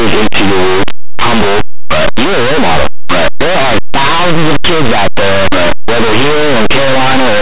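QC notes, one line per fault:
Throughout, linear audio read as companded: linear 8-bit speech samples are being expanded as mu-law codes, so values just one side of zero jump to the largest outputs. The result is loud, harsh distortion, not the faint, steady grain of ordinary 8-bit rounding.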